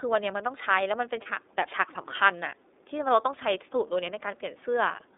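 The speech was carried through the iLBC codec, probably at its 13.33 kbps mode with 30 ms frames. The sound is confined to roughly 300 Hz to 3.7 kHz and has a plainly rough, synthetic edge. From 1.22 to 1.27 s, lost iLBC frames, consistent with a single missing 30 ms frame, were concealed by repeating the last pitch cycle. This leaves a brief buzzy, held vowel before the speech snaps back cleanly.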